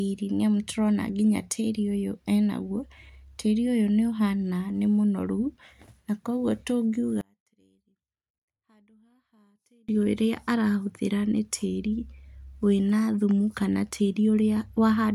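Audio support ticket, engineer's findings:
Speech collapses to a faint ghost 7.21 to 9.89 s, down about 37 dB, recovering just before "ũrĩa arahũthĩra nĩ tĩrĩ". Likely one channel inverted upstream of a mono fold-down. Centred content cancels on summing, leaving only the small L/R difference.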